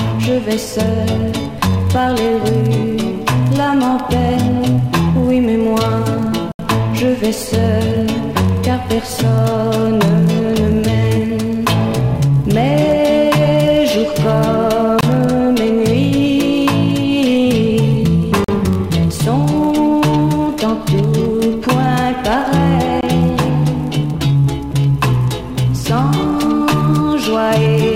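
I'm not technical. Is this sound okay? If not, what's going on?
No, not quite. There are four brief dropouts, each a block of digital silence: at 6.52 s (about 74 ms), 15.01 s, 18.44 s (about 43 ms) and 23.01 s (about 21 ms each for those two). In each spot the audio cuts to complete nothing and comes back with no fade. The longest sounds like a tiny hole. It's typically the playback or processing falling behind and leaving gaps.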